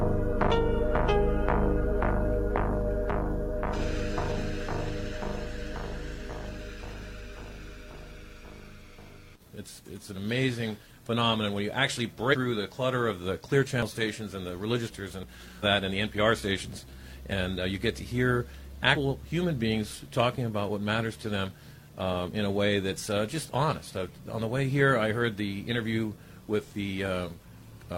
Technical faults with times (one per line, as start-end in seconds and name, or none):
4.42 dropped buffer (overrun)
12.29-12.35 compressed frames skipped
13.82 dropped buffer (overrun)
14.87-14.93 compressed frames skipped
15.23 dropped buffer (overrun)
15.59-15.64 compressed frames skipped
17.32 dropped buffer (overrun)
18.92-18.97 compressed frames skipped
21.47-21.52 compressed frames skipped
22.27 dropped buffer (overrun)